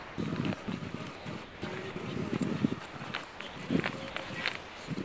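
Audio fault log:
0.00–0.18 s, 0.64–0.68 s, 1.92–1.96 s, 2.86–2.94 s and 4.56–4.88 s: sound dropped by the voice detector. In each gap the sound gives way to steady, featureless hiss for about 180 ms, 40 ms, 40 ms, 80 ms and 320 ms, then returns. The likely cause is the sender's detector judging the material as background and stopping transmission, with the receiver filling the silence with synthetic comfort noise until the detector reopens.
1.16–1.62 s, 3.24–3.56 s and 4.10–4.30 s: sound chopped by the voice detector. Within each stretch the detector likely toggled on and off more than once, so pieces of the sound, about 280 ms, 240 ms and 120 ms in total, are swapped for comfort noise. The result is a choppy, stuttering texture. Around all of this, the G.722 call path leaves nothing above 8 kHz.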